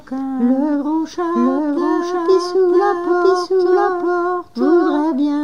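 From the start, a doubled audio track runs through the clip: a second, full-band copy trails about one second behind at roughly equal loudness, with no decay or room colour, likely from an edit holding two copies out of step. The waveform and spectrogram show every event repeated identically a second later.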